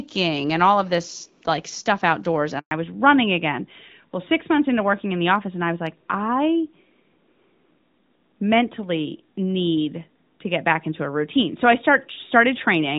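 At 2.59 s the speech cuts out abruptly, dying away within a few tens of milliseconds, and stays silent for 120 ms until 2.71 s. That silence is a handover gap: the call switched from one network to another, and no speech frames reached the decoder during the switch, so whatever was said in that stretch is simply lost.

From 2.71 s to the end, the speech sounds duller and rougher than before. The crisp upper range of the earlier wideband audio, which carried only light codec damage, is gone, and nothing remains above 4 kHz. This is a fallback to narrowband: after the handover, the call dropped from HD Voice to an older narrowband codec, which fits a move from AMR-WB at around 12.65 kbit/s down to AMR-NB at around 12.2 kbit/s.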